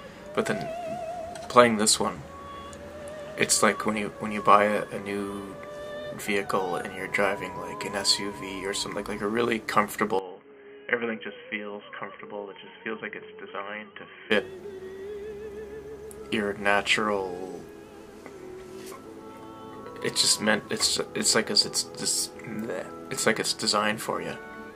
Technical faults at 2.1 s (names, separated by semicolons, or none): none